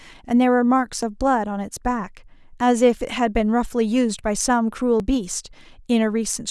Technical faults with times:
1.02 audio missing between chunks
3.01 audio missing between chunks
5.00 audio missing between chunks

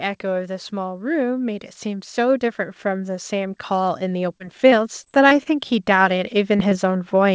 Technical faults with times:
0.21-7.34 automatic gain rising
3.88-5.48 scattered short gaps
6.58-6.75 short concealed packet loss

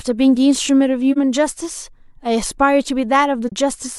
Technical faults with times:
1.12-1.18 AAC frame loss with muting
3.47-3.52 AAC frame loss with muting

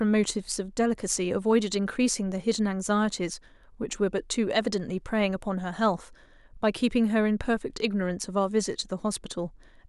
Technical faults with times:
none

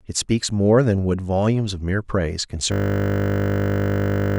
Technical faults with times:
2.72-4.38 system hang loop

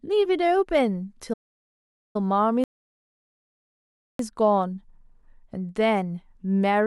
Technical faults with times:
1.33-2.16 playback stall
2.64-4.19 rebuffering stall

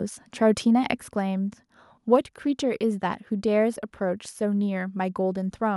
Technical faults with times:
1.02 microphone volume stepped down
2.16 microphone volume stepped down

